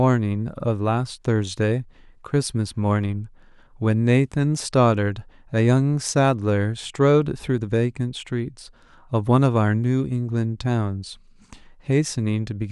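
A speech recording with nothing technically wrong with it, so there are no times or causes to report.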